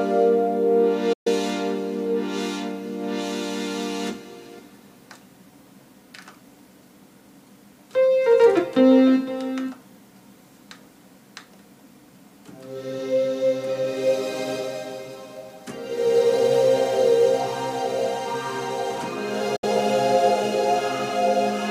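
A digital broadcast dropout occurs twice: the receiver lost valid frames and muted until good ones returned. With a quick 8 ms fade, the audio drops to silence from 1.13 to 1.27 s, consistent with about four lost frames, and again from 19.56 to 19.64 s, consistent with two.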